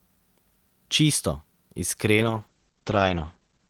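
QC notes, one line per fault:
2.14–3.69 s, call bitrate drop: the connection's bandwidth estimate fell and the encoder was pushed onto a much smaller bit budget, consistent with a fall from roughly 48 kbps to about 10 kbps. Audio bandwidth narrows from 20 kHz to 8 kHz, so the speech loses its top end and turns muffled, while coarser coding adds a rough, watery texture. The degraded state holds at its worst for about 1.32 s and does not recover before the clip ends.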